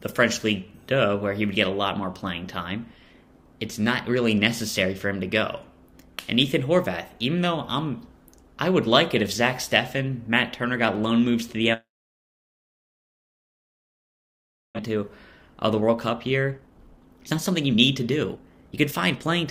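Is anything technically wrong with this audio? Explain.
Yes, there are two linked problems. From 11.73 to 14.81 s there's what sounds like a long network dropout: the last sound smears into a brief fading buzz, then roughly three seconds of near-silence. It's likely that packets stopped arriving, and about 1.6 s of audio never comes back.

Right after, from 14.88 to 19.48 s, there's a jitter buffer speed-up. The backlog, around a second and a half of delay, gets drained by snipping out tiny pitch-period chunks, so the audio plays at about 127% speed with unchanged pitch and feels rushed.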